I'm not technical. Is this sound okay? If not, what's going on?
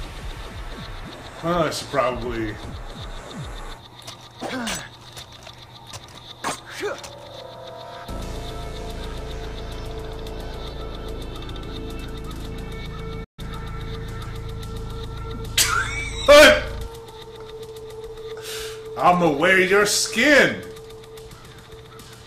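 No, there's one problem. At about 13.24 seconds the sound cuts out for roughly 0.14 seconds, until 13.39. That's a playback stall: the player most likely ran short of data or got held up briefly, so nothing came out until it caught up.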